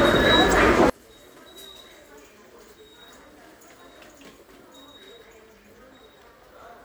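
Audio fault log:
0.50–0.53 s, corrupt frame decoded: a quick glitch peaking around -15 dBFS, lasting about one compressed frame. Flipped bits in that frame meant the decoder misread its gains or codes and put energy at the wrong frequencies.
0.90 s to end, one channel inverted: from here the sound drops by about 32 dB and only a faint remnant is left. The likely cause is one channel flipped in polarity, so everything the two channels share cancels when they're summed to mono.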